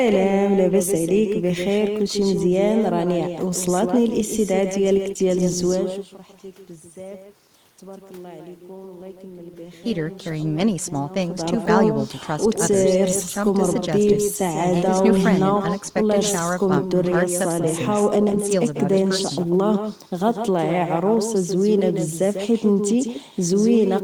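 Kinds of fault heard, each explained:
Echo with no canceller: the far end's loudspeaker output reaches its microphone and is sent back unremoved, so throughout this speech each phrase is trailed, roughly 150 ms later, by a thinner copy sitting about 7 dB below the direct sound.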